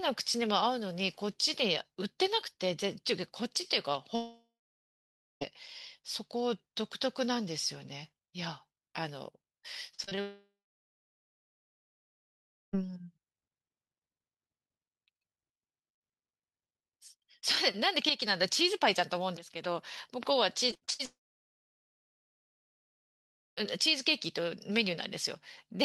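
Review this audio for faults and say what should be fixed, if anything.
Long network dropouts occur at 4.15–5.43 s, 10.21–12.75 s and 21.05–23.64 s, likely from a stalled connection. The last sound is stretched into a fading buzz, then silence of about 0.9 s, 2.19 s and 2.41 s follows. The speech resumes with roughly 1.26 s, 2.52 s and 2.52 s missing. Unlike choppy packet loss, each one is a single continuous hole. A steadier network path and more jitter buffering would prevent this.

Repeated packet loss, heard as robotic sound, occurs at 9.95–10.19 s (four gaps, longest 35 ms) and 20.71–21.01 s (five gaps, longest 55 ms). Each brief hole is patched by continuing the last sound, so nearly half of each stretch is concealed. The result sounds choppy rather than silent, and each stretch leads straight into a dropout. Forward error correction and redundancy would prevent this.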